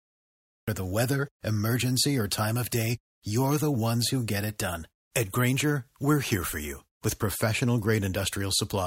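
A speech recording with a cut-off start. Digital silence runs from 0.0 to 0.68 s. At 0.68 s the audio jumps straight in mid-sound, with no natural attack or fade, just before "the weather emergency or". Capture or streaming evidently began late.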